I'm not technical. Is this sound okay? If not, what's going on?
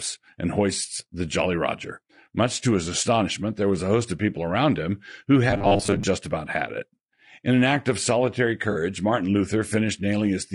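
No. Three problems can be heard in this speech.

Low-delay AAC compression runs through the whole clip. The recording was likely squeezed by AAC-ELD, the quick-response format used in video calls. It works in very short slices, so it can't capture the richness of a voice well, and at the modest quality used here the voice comes across as rough and grainy, with a hiss around the tones and a dulled, artificial top end.

Robotic sound from repeated short buffers appears from 5.50 to 6.03 s, right after "people around him who" and just before "about had it". Fresh audio likely arrived too slowly, so the playback kept repeating the last tiny snippet to fill the gap, for roughly half of that stretch. Those repeats, about 10 ms each, impose a steady 100 Hz buzz, giving the voice a flat, metallic, machine-like tone that only loosely follows the talking.

AAC frame loss with concealment hits from 8.71 to 8.76 s, just after "an act of solitary". 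About 40 ms of sound went missing, which fits a couple of lost chunks of data. The player patched the hole by guessing from the sound just before it, so instead of a clean gap you hear a brief smeared, noisy blip.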